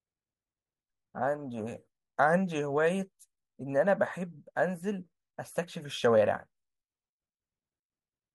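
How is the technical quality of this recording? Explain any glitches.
No technical faults are audible.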